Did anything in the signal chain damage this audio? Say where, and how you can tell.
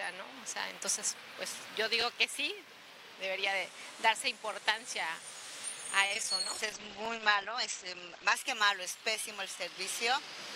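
Yes. Between 6.06 and 6.35 s there is repeated packet loss (robotic sound), a network-stage fault. Four short holes open in under a third of a second, the longest about 35 ms. Each is patched by extending the preceding sound, and roughly a third of that stretch is concealment rather than real signal. The rapid succession of filled gaps gives the choppy, robotic texture, with fragments audibly missing.

A call bitrate drop follows at the codec stage, from 6.43 to 8.42 s. The encoder falls from 96 kbps to 13 kbps and stays at the bottom for about 1.9 s. At that rate the audio band narrows from 20 kHz to 8 kHz, so the top end disappears and the sound turns muffled and rough. Coarse quantisation adds a watery, smeared quality until the bitrate climbs back after 8.42 s.

Overlapping chunks show up in the buffer stage at 7.05 to 7.07 s. A 20 ms slice plays twice because the next block begins before the previous one has finished. 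That duplication at the join is heard as a small stutter or click. Only one such join falls within this clip, and its placement fits chunks of about 2.5 s. Because the repeat sits inside the low-bitrate stretch, it lands on already degraded sound.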